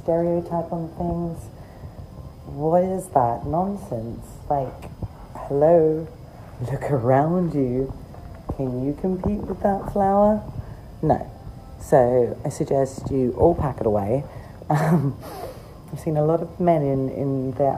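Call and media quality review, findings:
No faults turned up on this one; nothing in the clip needs a ticket.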